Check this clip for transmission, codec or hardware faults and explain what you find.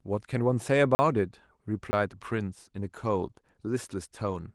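Two brief dropouts to digital silence are present, with light Opus coding at 24 kbps in hybrid mode running underneath.

Blocks of digital silence occur at 0.95–0.99 s (40 ms) and 1.91–1.93 s (20 ms). The output buffer was likely not filled in time, so the samples were zeroed. Each gap is a hard hole, cutting out and back with no fade. Packet-loss concealment would instead fill the gap with smeared sound.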